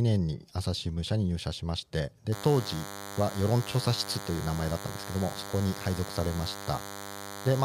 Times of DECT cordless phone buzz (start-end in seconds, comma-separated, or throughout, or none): 2.32-7.64